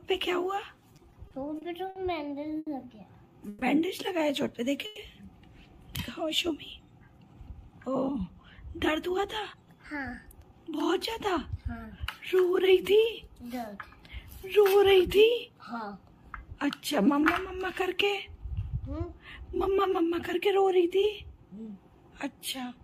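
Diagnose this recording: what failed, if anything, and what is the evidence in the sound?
Network delay hit the jitter buffer first as repeated stalls (stutter), from 0.89 to 1.98 s. The sound catches seven times. Each gap, 60 ms at most, is bridged by repeating the last sound. About 160 ms is filled, roughly 15% of that span, with nothing lost.

A short stall from a late packet follows at 2.58 to 2.69 s. The buffer ran dry, so the receiver held the last sound for 90 ms. It then resumed from the same point. That added 90 ms of delay without dropping any audio.

Two call audio freezes occur, at 3.49 to 3.64 s and 4.86 to 4.99 s. The sound is held as a continued buzz for 130 ms and 110 ms, never reaching silence, then picks up where it stopped. The likely cause is packets held up in the network.

A jitter buffer speed-up runs from 7.18 to 10.90 s. The audio plays about 7% fast at unchanged pitch and sounds hurried. 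The receiver trimmed short pitch-period pieces repeatedly, removing roughly 300 ms, to cut the extra delay held in the buffer.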